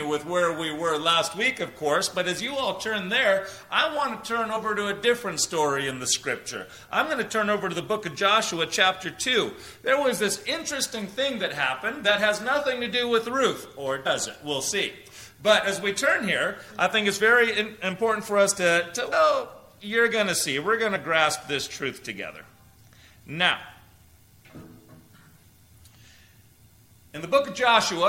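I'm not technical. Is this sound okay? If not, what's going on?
No. Compressed frames were skipped at 4.55, 14.05, 19.11 and 20.95 to 20.97 seconds. Small blocks of the stored audio were missing or rejected as damaged, so playback jumps ahead by roughly a twentieth of a second, a tenth at 19.11 and a fiftieth at 20.95.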